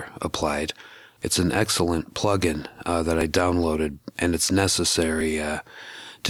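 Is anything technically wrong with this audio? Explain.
Yes, there is likely audio missing between chunks: a system working in 2-second blocks seems to drop a few milliseconds at each handover and butt the edges together. The result is two small skips, at 3.21 s and 5.21 s, each a tiny jump in the sound.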